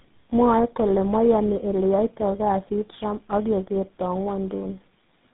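Tandem speech coding throughout: four speech codecs in a row, ending in GSM full rate, each re-encode the last one's degraded output, leaving speech rough, warbly and muffled, with nothing above 3.9 kHz.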